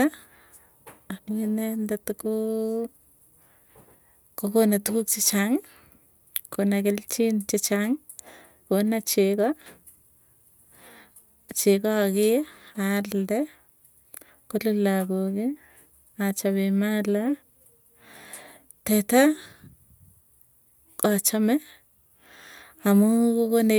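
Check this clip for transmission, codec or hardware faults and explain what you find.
Nothing in this speech stood out as a fault on a careful listen, so there's nothing here to report.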